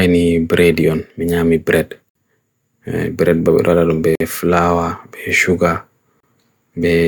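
At 2.09 to 2.15 s, 4.15 to 4.21 s and 6.20 to 6.23 s, the speech drops into hard-edged silence for about 60, 50 and 30 ms. These are gaps between stream segments. Joins every 2 s leave timing holes, filled with silence. Nothing is lost.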